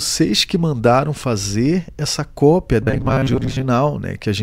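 From 2.82 to 3.66 s, after "mandaram fazer essa cópia", new audio likely arrived too seldom, so playback looped a 7.5 ms buffer in place of about half the real signal. This robotic sound from repeated short buffers imposes a rigid, metallic 133 Hz buzz on the speech.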